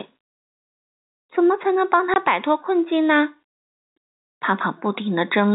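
Throughout the speech, the input gain is likely set well above what the microphone needs, so a fast limiter or compressor keeps reining it in on every strong syllable. That is gain pumping: the gain swings by roughly 5 dB as each loud sound hits. Loud and quiet passages sit unnaturally close together, and the whole delivery feels squeezed and breathing.

From 2.14 to 2.16 s, audio went missing in transmission and the receiver filled the gap with nothing. This is packet loss filled with silence. The 20 ms hole fits a single lost packet. Because the signal drops straight to silence and returns just as abruptly, the speech has a brief, hard chop. Everything sits within the narrow telephone band of the G.711 coding, with nothing above 4 kHz.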